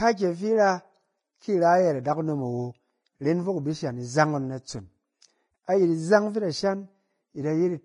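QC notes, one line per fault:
Throughout, Vorbis compression: the speech has nothing above 10.5 kHz, and what treble remains sounds hissy and grainy, with blurred consonant attacks. That's likely a heavily squeezed Vorbis encode, fitting a bitrate around 25 kbps, where fine high detail turns into noise.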